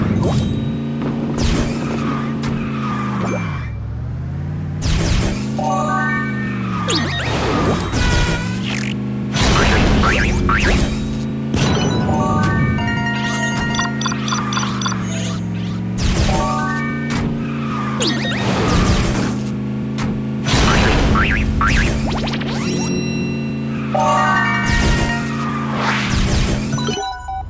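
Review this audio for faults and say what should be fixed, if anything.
Nothing to fix; no faults found in the audio.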